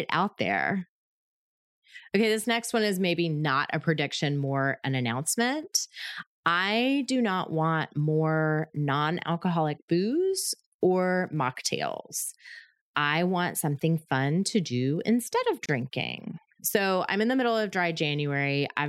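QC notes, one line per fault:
15.66–15.69 s, gap at a join of encoded pieces: the speech drops out for about 30 ms, then resumes exactly where it left off, because separately encoded segments were butted together with their start delay and end padding left in. On a waveform it shows as a flat notch with steep, slightly smeared edges; the spectrogram shows a thin vertical blank band.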